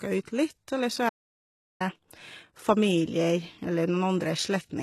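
A short speech recording with two faults. The treble sounds rebuilt rather than recorded, with gritty, smeared sibilants and nothing above 12.3 kHz. It is likely HE-AAC compression at a bitrate near 16 kbps. From 1.09 to 1.80 s the sound cuts to silence for 0.71 s, with no room tone. That is an audio dropout to silence, likely a lost input.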